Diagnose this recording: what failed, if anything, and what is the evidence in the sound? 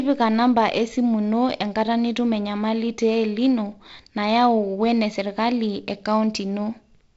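No fault found; the speech comes through intact.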